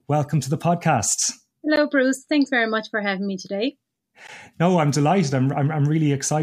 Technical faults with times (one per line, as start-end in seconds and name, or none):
1.76 gap between chunks
4.27 gap between chunks